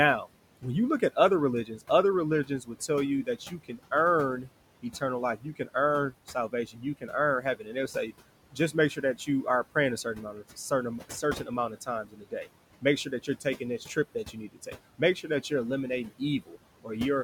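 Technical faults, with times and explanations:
Throughout, noise suppressor artifacts: the background drops by about 18 dB between phrases and returns under the speech.
0.25–1.83 s, 2.45–7.76 s, 8.52–15.51 s, 16.09–16.9 s, speech cut by the noise suppressor: soft consonants and word endings are treated as noise and dip by about 13 to 19 dB. They sound swallowed. The longest losses, roughly a second and a half in total, fall in 8.52–15.51 s.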